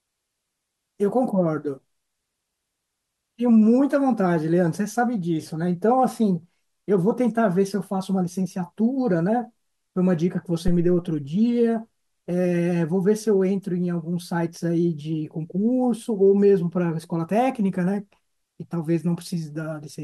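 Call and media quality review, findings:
Phantom power thump, speech track, 10.68 to 11.13 s. Deep low-frequency thump, peaking at about -13 dBFS, decaying in roughly 100 ms. Probable component: mic preamp phantom supply switched on a live input. The voltage step passes through the input coupling capacitors as one large transient. Check phantom switching and preamp input coupling.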